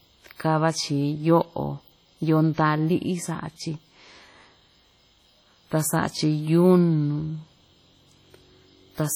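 Speech runs throughout with heavy transform-codec damage: a ringing, washy smear around each syllable and hiss that swells and falls with the signal, likely WMA compression at a rate fitting about 32 kbps. Unlike band-limited MP3, content extends to 20.1 kHz.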